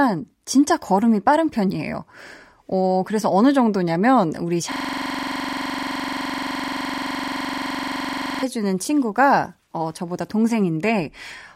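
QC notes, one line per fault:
4.72–8.43 s, system hang loop: the system stalled while the sound hardware kept cycling one 42.67 ms slice of audio, which fits a 2048-sample ring buffer, repeating it close to 90 times, so the sound becomes a rough, rattling buzz at 23.4 Hz.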